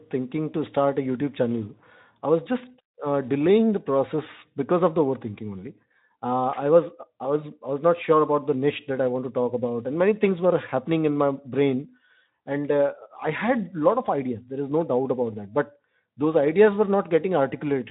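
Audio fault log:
No fault to log.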